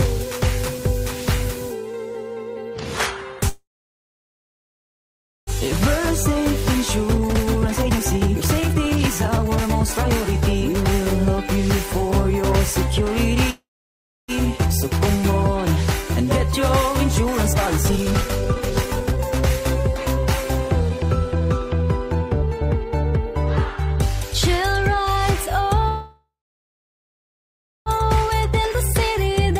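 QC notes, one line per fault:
3.49–5.50 s, 13.50–14.31 s and 25.88–27.89 s, call audio freeze: the sound stalls into a short fading tail and then near silence for about 1.8 s, 0.65 s and 1.6 s. It picks up exactly where it stopped, with nothing lost. The likely cause is delayed packets draining the jitter buffer.
6.41–11.27 s, 17.53–19.84 s, 20.89–22.52 s and 27.98–29.59 s, jitter buffer speed-up: the audio runs fast at unchanged pitch, clearly hurried at 138% and 132%, still slightly hurried at 108% and 106%. Repeatedly cutting pitch-period slices trims the backlog the freezes built up, around 2 s in the first stretch.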